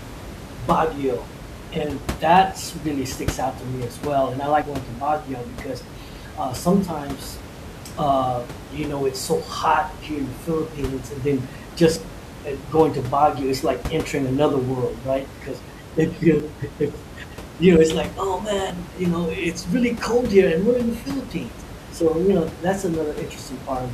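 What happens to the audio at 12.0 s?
Right around 11.96 s the speech jumps forward, as if a short slice of roughly 40 ms had been cut out and the two edges butted together. That is most likely a dropped buffer (overrun): the samples were overwritten before the software read them, so they are lost without any gap. On a waveform the trace changes abruptly at that point. A spectrogram shows a thin vertical broadband line where the speech harmonics break, with the room noise running through unchanged.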